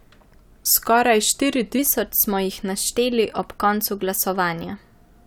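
From 1.79 s to the end, a wrong sample rate takes hold: audio recorded at 44.1 kHz plays at 48 kHz, running 1.09 times fast and about 1.5 semitones high. Speech sounds slightly hurried and higher. On a spectrogram, harmonics and formants shift upward and syllables compress.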